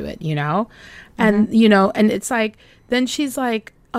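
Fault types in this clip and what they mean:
One channel drops out: one side of the stereo feed likely stopped carrying signal at 2.16 s, just after "you know and", and stays lost to the end. In the mono sum the speech abruptly falls by about 6 dB and remains quieter.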